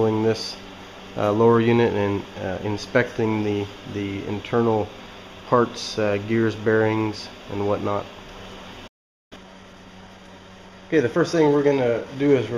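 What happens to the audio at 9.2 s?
At 9.2 s the audio is inside a playback stall running from 8.87 to 9.33 s: the sound stops mid-flow for about 0.44 s, likely because the player ran short of data or its thread was blocked. A waveform shows a flat gap; a spectrogram, a blank vertical band.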